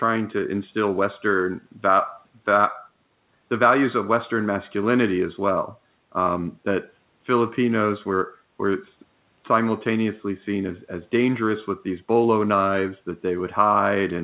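No technical faults can be heard in the speech, whose content stops at 4 kHz in the way that fits a narrowband telephone-grade call codec.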